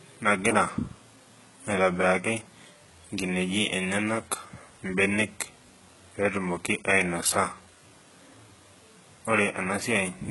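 From start to finish the speech has a gritty, metallic top end, with s sounds turning lispy and nothing above 11.5 kHz. This is likely heavy HE-AAC compression at a very low bitrate near 12 kbps, where the treble is synthesised from copied lower bands rather than carried through.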